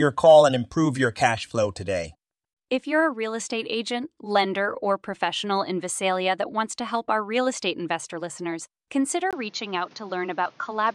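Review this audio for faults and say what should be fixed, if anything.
At 9.31 s the speech goes duller right through to the end, after a 20 ms gap, with nothing above 7 kHz and a new noise floor about 30 dB below the signal while the level holds steady. That points to the input likely having switched to a poorer device mid-recording. Locking the input device before recording, and keeping headsets from grabbing the call profile, would prevent it.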